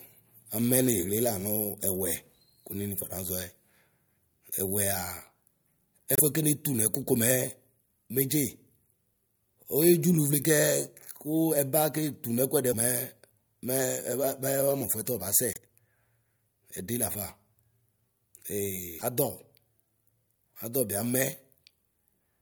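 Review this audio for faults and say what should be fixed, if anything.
Broken MP3 bit reservoir at 6.15–6.20 s, 12.71–12.74 s, 15.53–15.58 s and 18.98–19.02 s. Each is a brief glitch where the sound jumps forward. The likely cause is that frames of about 26.1 ms went missing, so the next frame's borrowed reservoir bytes came from the wrong frame. To prevent this, decode to PCM or use a reservoir-aware tool before cutting or splicing, and make sure no frames are lost in transfer.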